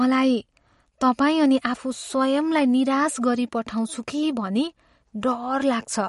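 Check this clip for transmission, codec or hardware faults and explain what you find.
One codec fault runs through the whole recording: the speech carries plainly audible MP3 compression artefacts from start to finish.

MP3 compression, present throughout: everything above 11.2 kHz is missing, so sibilants sound dull and clipped off, and the remaining detail has a watery, swirling quality. The likely cause is a starved MP3 encoder, consistent with a low bitrate of 49 kbps. Short of bits, it drops the top band at a fixed edge and discards quiet frequency lines, which flicker in and out between frames. On a spectrogram this shows as a flat ceiling at 11.2 kHz with patchy, blocky holes beneath it, and the waveform's consonant onsets look softened.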